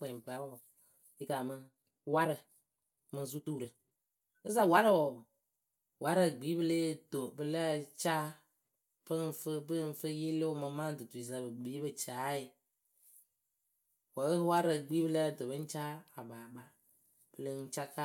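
From the start to 6.08 s the speech runs at about 1.54 times its natural pace, then drops abruptly to normal speed while the pitch stays unchanged throughout. The fast stretch sounds rushed. This is likely a time-stretched section: software compressed the opening to fit a shorter duration, holding pitch by discarding short slices of the waveform rather than resampling it.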